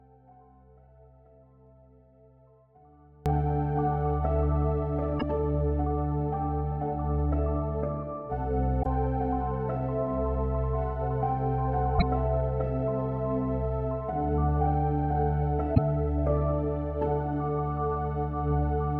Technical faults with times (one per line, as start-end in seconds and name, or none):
0.00-3.26 audio dropout to a faint residue
5.16-5.23 damaged data in a compressed stream
8.79-8.86 damaged data in a compressed stream
11.95-12.02 damaged data in a compressed stream
15.71-15.78 damaged data in a compressed stream